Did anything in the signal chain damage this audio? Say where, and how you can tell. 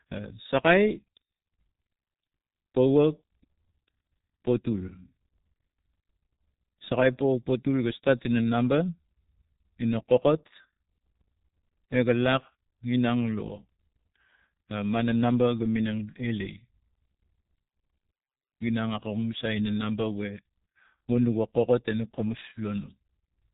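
Yes, at the codec stage, and throughout the speech. Nothing passes above about 3.8 kHz, so it sounds muffled. Voices turn hoarse and consonants smear. That fits G.723.1 at 6.3 kbit/s. It codes 30 ms frames with a slowly updated voice model, so fine detail is lost.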